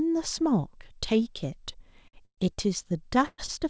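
At 2.08 to 2.16 s the speech hangs on one sound for about 52 ms with a faint buzz, a short stall from a late packet: the jitter buffer ran dry and the receiver stretched the last sound until the packet arrived. From 2.25 to 2.41 s comes a call audio freeze, a fading buzz that drops into about 80 ms of silence before the speech resumes where it left off, 124 ms later than it would have. The likely cause is packets held up in transit, emptying the jitter buffer. Another short stall from a late packet follows at 2.54 to 2.60 s, holding a sound for about 35 ms. At 3.26 to 3.41 s a second call audio freeze stretches the sound into a decaying buzz with about 30 ms of silence, delaying the speech by 121 ms. A final short stall at 3.46 to 3.51 s holds a sound for about 21 ms. Across the whole clip, nothing above 8 kHz comes through the G.722 call path.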